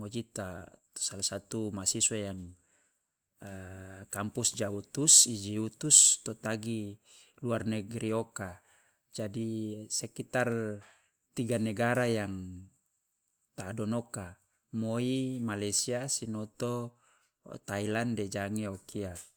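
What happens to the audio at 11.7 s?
Nothing goes wrong at 11.7 s; the speech carries on intact through that moment with no dropout, click or distortion.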